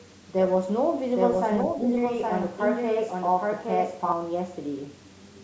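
From 1.1 s to 4.1 s the speech is heard twice: a second full-band copy trails the original by roughly 0.7 s, only a few dB quieter. This is a doubled audio track, likely from the same signal being captured again through a slower path. Unlike room echo or reverb, the copy has no decay tail and no added room colour. It is a clean, fixed-delay replica that switches in at 1.1 s and stops abruptly at 4.1 s.

Inside that stretch, from 1.77 s to 1.87 s, the level dips by a few dB for about a tenth of a second. This is speech suppressed in double talk, likely an echo canceller turning its own talker down because it could not separate that talker from the overlapping far-end sound. It is a brief partial duck rather than a full dropout, and it does not carry the packet-loss glitches that would point to a network gap. The audio's top end stops at 8 kHz, which is consistent with the call's normal microphone processing.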